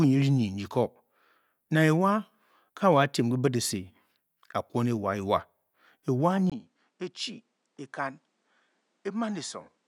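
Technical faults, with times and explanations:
6.50–9.88 s, input switched to a poorer device: after a 20 ms gap the speech turns duller and about 10 dB quieter, with a faint new background hiss, likely from a change to a lesser microphone. The spectrogram shows nothing above 10.1 kHz, and the waveform visibly shrinks.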